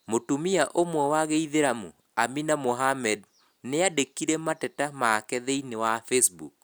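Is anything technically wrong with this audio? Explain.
No technical faults are audible.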